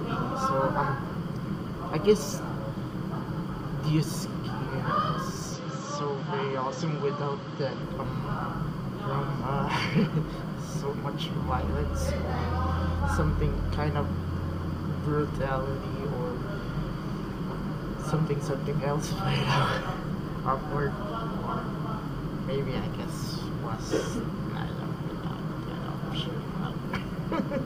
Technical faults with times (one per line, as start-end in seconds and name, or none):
5.53-7.83 input switched to a poorer device